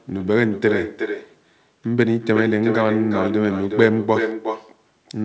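Echo with no canceller runs throughout this speech clip: every phrase is followed, roughly 0.4 seconds later, by a copy about 7 dB quieter that sounds thinner. The far end is playing the call through a loudspeaker, its microphone picks that playback up again, and nothing subtracts it before it returns over the network. The audio is band-limited to 8 kHz, which fits a wideband call codec such as G.722.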